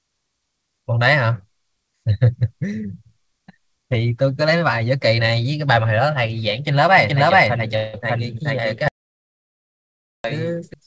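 From 6.98 s to 10.74 s there is a doubled audio track. A second full-band copy trails by around 400 ms at about equal level. Likely a slower capture path.

From 7.76 s to 7.95 s a call audio freeze fills 175 ms with a fading buzz or hiss. The likely cause is an emptied jitter buffer. Nothing is lost; the audio resumes later.

From 8.88 s to 10.24 s an audio dropout to silence cuts the sound completely for 1.36 s. No room tone remains. The input was likely lost.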